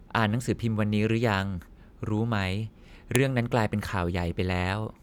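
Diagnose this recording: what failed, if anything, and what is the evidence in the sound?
A sharp snap at 3.16 s in the speech is a file header played as audio: storage-level joining left the next piece's header bytes in, playing as samples.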